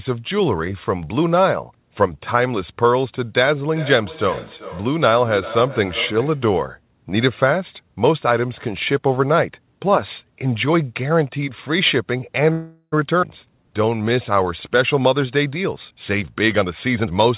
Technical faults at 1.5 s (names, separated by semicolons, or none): DC step